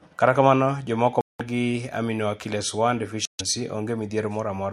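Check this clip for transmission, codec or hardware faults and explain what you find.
Two short silences cut into the speech, at 1.21–1.41 s and 3.25–3.41 s. This is likely a Bluetooth dropout: late packets were discarded, leaving abrupt holes. Unlike a stall, the speech resumes further along, not where it stopped.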